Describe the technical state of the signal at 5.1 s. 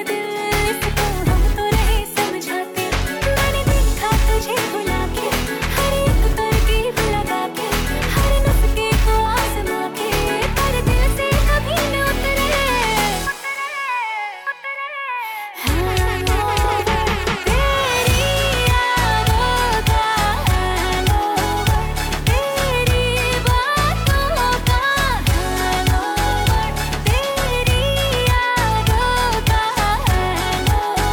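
At 5.1 s the signal is intact, with no audible fault at that point.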